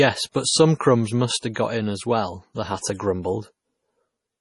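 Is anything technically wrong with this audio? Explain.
Yes. There are two related faults in this speech clip.

Throughout, the audio shows heavy MP3 compression damage, likely from low-bitrate encoding; the sound fits roughly 32 kbps. With so few bits, the encoder has removed everything above about 11.4 kHz, so the top end sounds dull and clipped. Weak frequency lines are dropped and restored from frame to frame, which gives the speech a watery, swirling texture, with metallic chirps on sibilants and blurred consonant onsets.

Pre-echo occurs three times. It is 29 ms long at 0.32 to 0.35 s, 49 ms long at 1.38 to 1.43 s just before "have got in as", and 23 ms long at 1.54 to 1.56 s just before "got in as well". The codec spreads its quantisation noise across an entire transform block. When a sharp onset lands late in a block, the noise meant for the loud part also fills the quiet gap before it. 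Each of these onsets is therefore preceded by a brief hiss and sounds softened.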